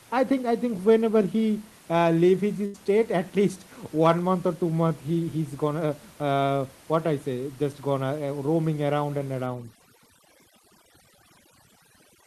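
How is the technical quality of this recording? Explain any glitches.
Two glitches stand out: a short dropout early on and heavy-handed processing at the end, beneath which steady room noise sits about 26 dB below the speech.

From 2.65 to 2.76 s there is a burst of packet loss. The receiver stretched the last received sound over about 85 ms, fading it into a held buzz or hiss, and when the audio resumes roughly 80 ms of speech is simply missing.

From 9.46 s to the end, overdone noise removal takes hold. The suppressor mutes individual frequency bands whenever they drop near its noise estimate, so the room noise gives way to near silence with twinkling specks, and quieter components of the speech are cut away with it.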